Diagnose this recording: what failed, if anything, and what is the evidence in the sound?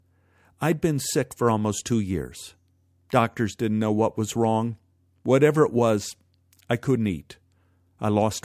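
Nothing failed; no faults heard.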